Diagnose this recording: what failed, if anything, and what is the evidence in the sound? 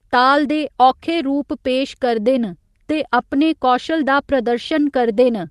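Nothing failed: the speech comes through the call path intact, its top end rolling off around 12 kHz as expected from a super-wideband Opus link, with no dropouts, clicks, level jumps or timing errors at any point.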